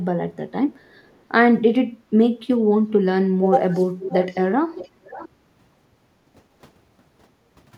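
Three stretches of echo leak show up in this speech. From 0.74 to 1.0 s there's a very faint copy trailing the talker by about 430 ms. From 4.0 to 4.37 s it's much more obvious, lagging around 560 ms. From 4.75 to 5.29 s the same 560 ms lag returns, clearly quieter. The likely cause is a speakerphone on one side whose echo canceller let some of the playback through and sent it back.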